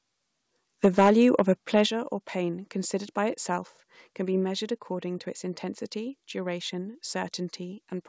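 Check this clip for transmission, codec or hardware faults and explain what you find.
Two faults are present, both tied to the microphone input. The sound passes through a G.722 call path at what sounds like 64 kbps, with nothing above 8 kHz.

Microphone overload occurs twice. The first runs from 0.84 to 1.42 s, ending just before "of a". It pushes about 5 dB past the converter's limit, with a few percent of samples flattened. The second is brief, 1.76 to 1.80 s, right after "of a". It is about 2 dB over, with a similar small share clipped. The likely cause is input volume set too high. The loudest peaks hit the converter's ceiling and their tops are sheared off. That adds a harsh, crackling edge to those stretches.

A microphone volume step-down follows at 1.86 s, between "of a" and "or pain considered by". The level drops by about 8 dB in one step. Both the speech and the background fall together. 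This likely comes from the call software reacting to the clipped peaks and cutting the device's input volume. It sounds like an abrupt drop, as though the speaker suddenly moved away from the microphone.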